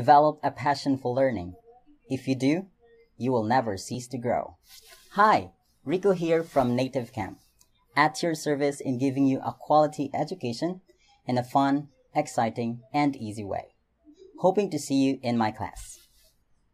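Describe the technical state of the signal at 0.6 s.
At 0.6 s the signal is intact, with no audible fault at that moment.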